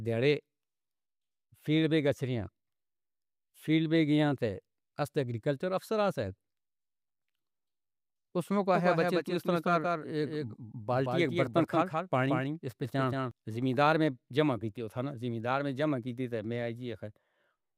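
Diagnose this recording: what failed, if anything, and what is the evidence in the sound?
From 8.75 to 13.31 s, ending just before "زمینداراں نے جما کیتی", the speech has a doubled audio track: a full-band copy trails about 0.2 s behind, roughly 5 dB quieter, and starts and stops abruptly with no reverberant tail. The stage is likely a second, slower capture path or a misaligned edit. A spectrogram shows each feature repeated, slightly fainter, a fixed interval later.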